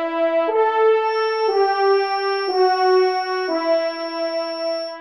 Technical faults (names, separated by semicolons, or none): feedback whistle